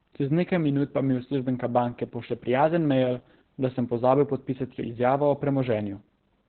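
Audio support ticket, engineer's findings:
Opus voice compression, whole clip, start to end. Speech muffled, hoarse, slightly robotic. Encoder running SILK linear prediction in narrowband mode: band limited, excitation coded coarsely, heavy codec damage consistent with roughly 8 kbps. Spectrogram: hard ceiling, nothing above 4.3 kHz, smeared blocky harmonics below. Waveform: envelope looks intact, fine detail visibly simplified.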